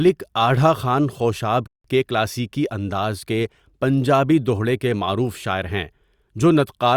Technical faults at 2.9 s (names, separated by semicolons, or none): none